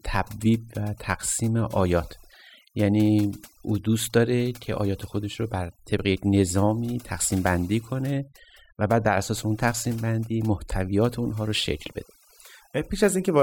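A speech recording with overdone noise removal running from start to finish. The noise reduction was set far too hard. Frequency bands close to its noise estimate get pulled almost to nothing. Quiet parts of the voice fall in those bands and vanish with the noise. Between phrases the background drops and breaks up into twinkling, glassy specks. The voice itself has its softer detail stripped out.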